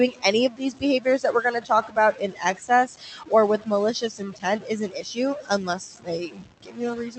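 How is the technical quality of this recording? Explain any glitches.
Pretty rough, honestly. There are two real problems, and both run through nearly the whole speech clip. The room noise sits about 21 dB under the speech, and the top end stops around 8 kHz the way a call codec does.

Low bit depth without dither is there from start to finish. The grit sounds like the audio was likely truncated to around 5 bits with no dither. The rounding error follows the speech, so it sits only about 10 dB below it and turns softer passages sandy and buzzy.

Speech cut by the noise suppressor runs from 0.1 s to the end at 7.19 s. The suppressor keeps mistaking bits of speech for background and pulling them down, by as much as about 18 dB. Soft consonants and word tails come out swallowed or oddly faint.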